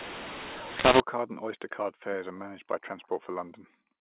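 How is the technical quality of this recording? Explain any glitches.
The recording has one clear glitch, in the first second. From 0.0 to 1.0 s the speech turns harsh and gritty, its loudness lurching unevenly and the gaps hissing with noise. This is mu-law and A-law mixed up: audio coded with the mu-law variant of G.711 telephone coding was read back as A-law, so each sample's level is mapped wrongly, with some too loud, some too soft, and near-silent samples pushed well above silence. After that the mu-law coding is read correctly, and the narrow telephone band, with nothing above 4 kHz, can be heard.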